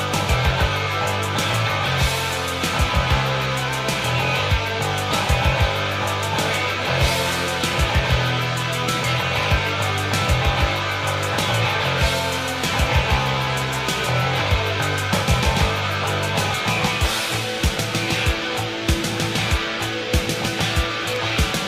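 No technical faults can be heard anywhere in the clip. The audio runs without any interruption, distortion or other defect.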